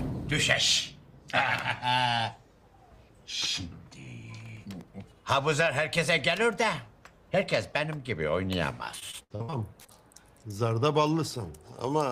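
From 4.46 to 4.88 s there's a short burst of processor overload crackle. Tiny buffers, well under a millisecond each, kept missing their deadlines, about seven of them, and each slot got stale audio, so you hear a gritty, crackly tear over the sound.

Then from 8.99 to 9.90 s you get repeated packet loss, with that choppy, robotic quality. There are eight gaps, the longest about 69 ms, patched by stretching the last bit of sound, so roughly a third of that stretch is filler.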